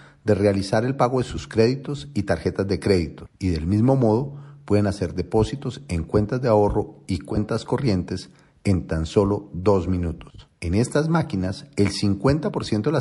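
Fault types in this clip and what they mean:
MP3 compression: The whole clip has a watery, swirling quality, plainly audible throughout, which is likely from a low-bitrate MP3 encode, consistent with roughly 48 kbps, where the encoder drops weak spectral components frame to frame.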